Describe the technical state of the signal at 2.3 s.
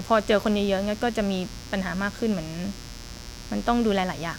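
At 2.3 s there's mains buzz running under the speech, as it does through the whole clip. Sharp spikes twice per 60 Hz cycle stack up harmonics into several kHz, giving a steady, raspy buzz sitting roughly 20 dB below the speech.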